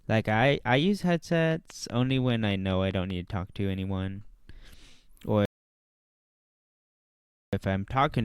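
From 1.32 to 3.11 s a train of clicks runs at a regular 5 per second, about ten sharp, similar ticks peaking roughly 5 dB above the speech and audible through pauses. The source is likely interference from nearby equipment or a faulty connection or power supply.

At 5.45 s a rebuffering stall cuts the audio to silence until 7.53 s. Playback ran dry and waited for more data, then resumed exactly where it stopped. Nothing is missing, but about 2.07 s of dead air is inserted.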